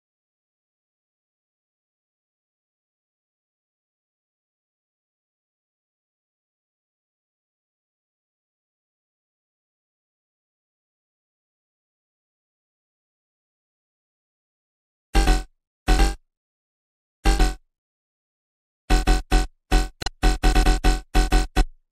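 Throughout, the sound has a watery, swirling quality with smeared attacks, likely from MP3 compression at a bitrate that fits about 64 kbps. The encoder switches weak frequency components on and off between frames. At 17.36–17.40 s and again at 20.00–20.08 s, brief glitches are heard. These come from damaged data in the compressed stream. The decoder misreads the corrupted frames, loses sync and skips forward to the next valid frame header.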